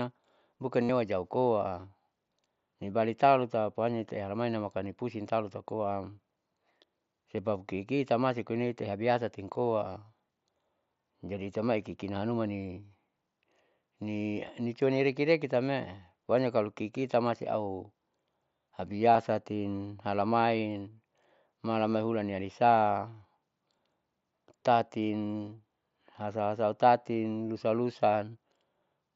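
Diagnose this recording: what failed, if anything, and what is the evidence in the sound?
Concealed Bluetooth headset packet loss at 0.83 to 0.89 s, 7.38 s (just before "kiki tamasi") and 19.13 to 19.15 s. Packets on the headset-to-phone radio link went missing, and the receiver filled each gap by repeating recent waveform. The 60 ms run at 0.83 s sounds like a steady buzzy tone, while the single brief loss at 7.38 s is nearly hidden. The wideband mSBC headset codec is heard carrying the speech.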